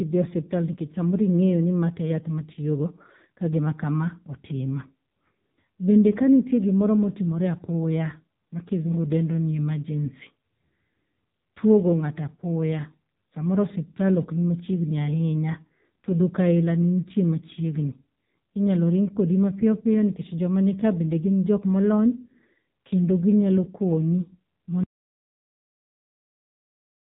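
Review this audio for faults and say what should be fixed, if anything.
The speech runs through an AMR narrowband mobile codec for its whole length, and the damage is heavy. Nothing above 3.8 kHz survives, and the voice is buzzy and synthetic. The codec rebuilds speech from a vocal-tract model excited by a few pulses per short subframe, and at this quality that fits a low rate, around 6.7 kbps. Plain low-pass filtering would only dull the sound; this codec also adds a metallic, pulse-driven roughness. Prevention: capture or transfer the audio over a wideband path instead of a 2G/3G-style narrowband mobile link.

An audio dropout to silence begins at 24.83 s and lasts to the end of the clip. The sound cuts off mid-flow into silence with no room tone, most likely because the input was lost through a disconnected device, a failed link or a mute while recording carried on writing silence. A pause or a fade would keep some background noise or taper off, but this drops abruptly to silence and stays there. 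Prevention: monitor input levels during capture and secure the connection so the source cannot drop out unnoticed.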